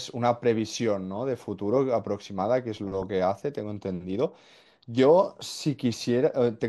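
From start to finish the speech carries a dull, gurgling, granular distortion, most likely from MP2 compression at a low bitrate, with a character that fits something around 80 kbps. The upper sub-bands keep switching off and back on, so the top end flickers while the remaining bands sound coarsely quantised. On a spectrogram the high frequencies appear as blocky patches that blink in and out above a ragged ceiling. The waveform shows no comparable sign.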